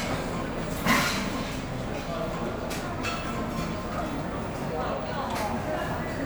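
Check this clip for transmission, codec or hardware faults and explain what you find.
No transmission, codec or hardware faults turn up anywhere in this clip. Nothing in the audio calls for a fault report.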